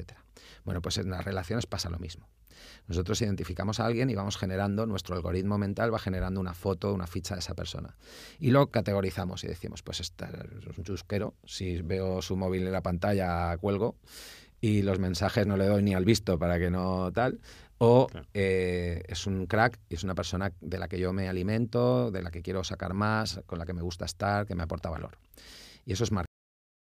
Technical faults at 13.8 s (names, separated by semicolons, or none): none